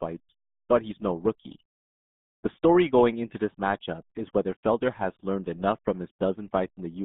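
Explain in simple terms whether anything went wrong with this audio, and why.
RealAudio 14.4 codec damage runs through the whole clip, from start to finish. This old dial-up speech codec squeezes the speech so hard that nothing above about 3.8 kHz survives. The voice sounds muffled and gargly.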